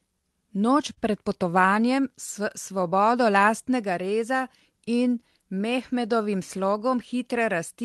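Throughout the speech there is clock drift between sender and receiver: the sender's clock runs about 3 percent slow. The jitter buffer keeps draining, so the receiver has to stretch material to avoid running dry, which leaves a faint, uneven looseness in the timing.

From 0.22 s to 7.82 s, repeated timing corrections play the audio at 97 percent speed, adding roughly a fifth of a second overall. The repeated fragments are unevenly spaced but always lengthen the audio, heard as slight hiccups and a subtly dragging, unsteady tempo.

At 0.93 s to 0.99 s, there is a short stall from a late packet. The buffer emptied, and the receiver held the last sound for 42 ms until the packet arrived, then resumed without losing anything. The result is a briefly frozen, held-over sustain.

The call path's band limit near 12 kHz fits an Opus codec at around 24 kbps.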